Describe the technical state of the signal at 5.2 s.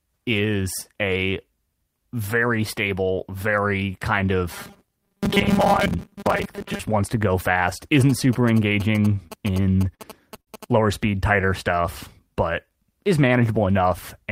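At 5.2 s you're right in the middle of robotic sound from repeated short buffers, running from about 4.53 to 6.80 s. The speech turns into a stiff, metallic buzz pinned at 200 Hz. What's likely happening is that fresh audio isn't arriving often enough, so a tiny chunk gets looped to fill the gaps, which fits a 5 ms buffer, with roughly half the sound made up of repeats.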